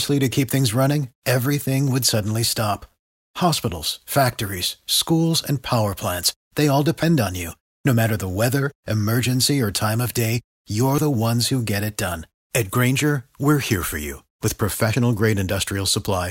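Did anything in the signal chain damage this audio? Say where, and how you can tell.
Yes. The speech jumps abruptly at 7.03 s and again at 10.98 s, each time dropping a sliver of around 40 ms and butting the two sides together with no gap of silence. The skips sit about four seconds apart, which points to audio missing between chunks, likely at the recorder's buffer or file-writing stage: it handles the signal in 4-second blocks and loses a short stretch each time it closes one block and opens the next.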